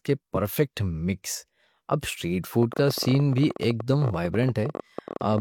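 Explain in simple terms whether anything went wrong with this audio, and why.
From 2.63 s to 5.39 s, a train of clicks ticks over the speech, around fifty in all at about 16 per second, unevenly spaced and audible in pauses too. This likely comes from electrical interference or a faulty connection or power supply injecting repeated pulses.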